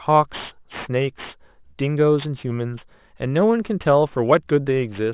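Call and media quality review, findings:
Aliasing, whole clip. Downsampling step with no anti-alias low-pass, which fits a conversion from 24 kHz to 8 kHz. Speech energy above the 4 kHz fold point is mirrored back below it. Result: gritty, metallic sibilants, spurious unrelated tones, and a spectrum packed hard against the 4 kHz band edge. Folded content sits roughly 20 dB under the speech. Fix: filter before decimation.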